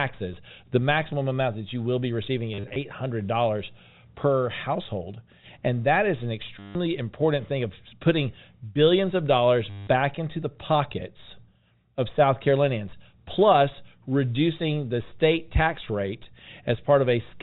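A brief robotic stutter interrupts the speech three times. The first, from 2.54 to 2.76 s just after "you will be receiving", is scattered and rough, with broken runs up to about 40 ms long. The others, at 6.59 to 6.75 s between "that is an" and "important thing of putting", and at 9.7 to 9.87 s between "putting billions of dollars" and "into the pockets of", are steadier buzzes. This is packet loss with the last packet repeated: the receiver kept replaying the most recent packet until fresh ones arrived, out of step with the pitch. The buzz rate fits 10 ms packets, about 100 Hz. The narrow telephone band of the G.711 coding is audible throughout.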